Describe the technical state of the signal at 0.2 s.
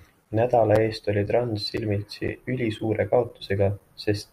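At about 0.25 s there is a gap between chunks. The speech stops dead for roughly 7 ms, then resumes. The audio arrives in half-second chunks, and silence sits at the join. Nothing is lost. The sound is briefly interrupted by a short hole.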